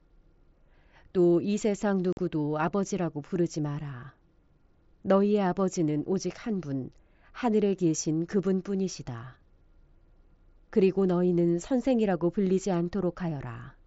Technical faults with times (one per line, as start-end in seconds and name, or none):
2.13-2.18 unconcealed Bluetooth headset packet loss